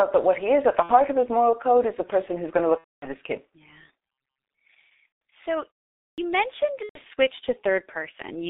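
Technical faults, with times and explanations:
Throughout: G.723.1 codec. The whole clip runs through a low-rate internet-telephony codec at 6.3 kbit/s, and the damage is heavy. The line band only spans about 250 Hz to 3.7 kHz, so there's no low body and nothing airy up top, which leaves the speech muffled. On top of that, the codec refreshes its voice model only every 30 ms frame, so consonants smear together and the voice picks up a hoarse, grainy edge.
0.83–0.94 s, 2.78–3.08 s, 5.09–5.19 s, 6.83–7.00 s: VoIP packet loss concealed by the speech codec. These are four dropouts where the decoder had nothing to play and kept extrapolating from its last pitch and filter state, turning the gain down as it went. Each one comes out as a stretched buzzy tone or coloured noise that fades off. The one at 2.78 s is the longest, roughly 240 ms lost, which fits about eight missing frames, and the codec mutes it from the third lost frame on. 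The others are shorter, around 60 to 150 ms.
6.07–6.18 s: Clipped start after a pause. After a gap of about 0.4 s, the next stretch of speech comes in abruptly and its opening is missing, roughly 110 ms of it. The playback device most likely dozed off during the quiet and needed a moment to wake back up, so the first sounds got swallowed.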